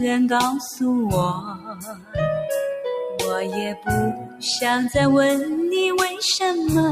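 The audio pumps and thins throughout, with its level swinging by around 10 dB as held and fading parts sink while attacks come through. A noise suppressor built for speech was left on and applied to music or sounds, mistaking steady tones and decaying tails for background noise. Two stretches are cut hardest by the noise suppressor: from 1.4 to 2.15 s the sound dips by up to about 15 dB, and from 4.16 to 4.43 s by up to about 11 dB, because the suppressor treated those passages as noise.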